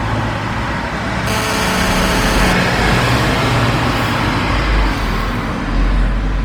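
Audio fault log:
Throughout: Opus compression, likely. The sound is plainly damaged in a way that points to Opus running in its music mode, at a rate that fits around 24 kbps. Energy stays present in every band, so there are few swirly gaps. Instead, tonal parts turn rough, grainy and noisy. At this rate the encoder runs short of bits and fills bands with folded or noise-like content rather than real detail. The band stays full, with nothing above 20.2 kHz.
1.27 to 2.53 s: GSM phone buzz. A hard, raspy buzz appears at about 217 Hz, rich in harmonics, sitting about 6 dB below the sound. It has no relation to the sound itself. A nearby 2G phone sends radio bursts 217 times a second, and the audio circuitry rectifies those pulses into audible clicks at that rate. The buzz stays nearly steady for its span, which fits a phone in a call.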